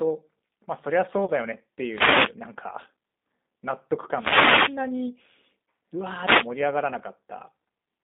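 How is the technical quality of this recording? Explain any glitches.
The recording's technical quality is limited: it carries narrowband codec colouring throughout, plus one brief dropout and three bursts of radio static.

Throughout, the speech sounds thin, slightly rough and synthetic, confined to about 200 Hz to 3.7 kHz. That is the G.729 codec at 8 kbit/s, rebuilding speech from a vocal tract model and sparse pulses.

From 1.25 to 1.30 s, the sound smears into a buzzy tone or coloured noise that fades. This is VoIP packet loss concealed by the speech codec: about 30 ms went missing, which points to a single lost packet, and the decoder extrapolated from its last frame.

At 1.89 to 2.34 s, 4.11 to 4.82 s and 6.21 to 6.48 s, short swishes or bursts of static are heard. These are wireless microphone noise hits, where reflections cancel the FM radio signal and receiver noise rises.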